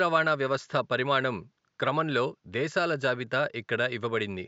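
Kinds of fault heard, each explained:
Nothing stood out on listening to this speech, apart from faint room noise well below the talking, at about 53 dB down.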